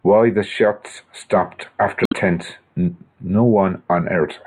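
Damaged data in the compressed stream, 2.03 to 2.13 s: corrupted bytes knock the decoder out of frame sync, leaving a brief glitch in the speech.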